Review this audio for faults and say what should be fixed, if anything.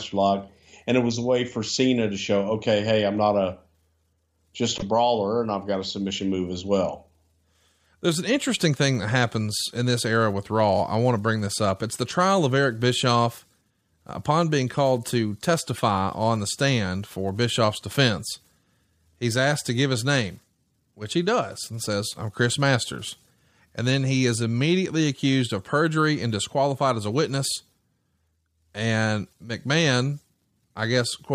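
At 4.78 to 4.82 s the speech breaks into a brief glitch lasting about 40 ms. That is damaged data in a compressed stream: corrupted bytes made the decoder misread frames, lose sync and resume at the next header. Verify transfers with checksums and use a container with error detection so corrupted frames are caught before playback.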